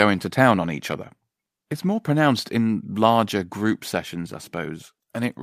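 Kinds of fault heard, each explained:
Microphone volume stepped down: right after "to town on each", about 1.02 s, the speech and background drop by about 2 dB at once, likely the call software lowering the microphone's input gain.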